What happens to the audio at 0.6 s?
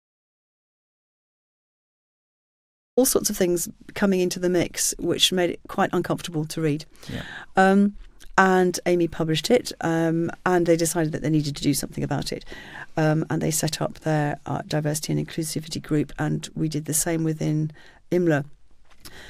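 At 0.6 s the clip is inside an audio dropout to silence that is already under way when the recording begins and lasts until about 2.97 s. The speech then starts abruptly, mid-flow. The gap is silence with no room tone at all, most likely because the input was lost while the recorder kept writing silence. On a waveform it shows as a flat line, and on a spectrogram as a completely empty, black band across every frequency.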